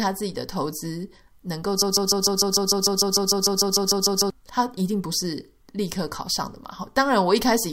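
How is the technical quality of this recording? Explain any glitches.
The recording has one clear fault, a broken-record loop from 1.82 to 4.30 s. A fragment of about 150 ms repeats exactly, back to back, 17 times, and the speech that belonged there is lost. The likely cause is a stalled player or stream resending its last held chunk. Unlike an echo, the repeats are identical copies that never fade.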